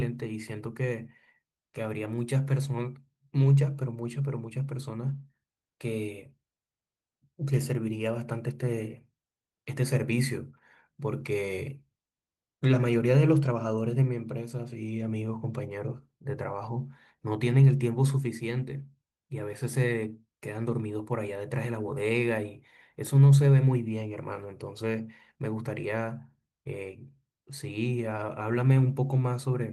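Nothing technically goes wrong anywhere in this speech recording, so there's honestly nothing to flag.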